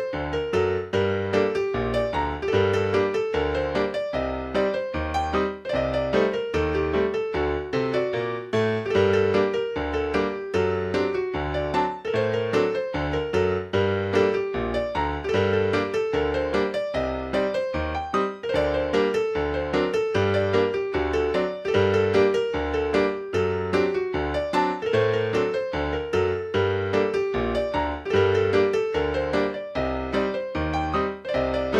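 No technical faults can be heard anywhere here.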